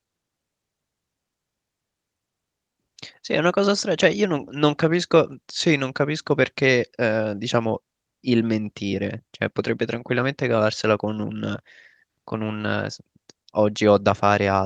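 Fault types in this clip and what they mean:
No faults are audible anywhere in this speech recording.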